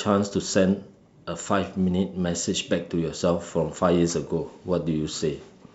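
No technical faults can be heard in this recording.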